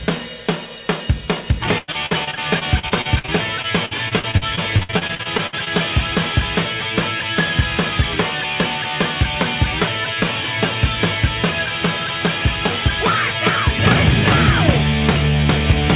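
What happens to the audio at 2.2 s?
At 2.2 s the audio is inside a stretch of repeated packet loss (robotic sound) from 1.78 to 5.68 s. Dozens of dropouts, up to 98 ms long, are patched by extending the previous sound, which makes it choppy and robotic.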